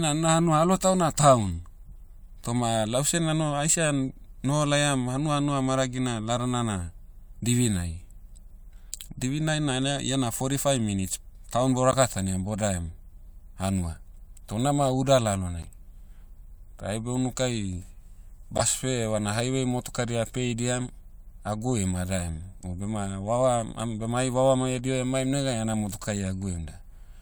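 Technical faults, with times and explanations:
5.37 s, 11.91–11.95 s, 15.62–15.65 s, 18.58–18.62 s: corrupt frame decoded. At the first, between "noho laiam hanua" and "hanua maragina ladana na", then after "fourty five minutes town" and "unama uda", a damaged compressed frame was played as if valid. Misread gains and codes put energy at the wrong frequencies, so each event is a brief chirp or noise blip lasting about one or a few frames, from about -30 to about -10 dBFS, loudest at 18.6 s. Unlike a dropout or concealed packet loss, the damage adds a foreign sound over the speech.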